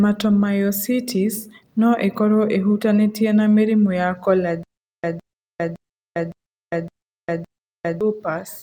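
Speech, with a stutter with silent gaps from 4.63 s to 8.01 s, just after "ĩhutanĩtie na mĩrimũ ya": a 159 ms burst repeats six times, each followed by 403 ms of digital silence, every 562 ms. This is likely a stalled stream replaying its last fragment on each retry. On a waveform and spectrogram, identical blocks alternate evenly with flat, empty gaps, and the sound that should fill that span is missing.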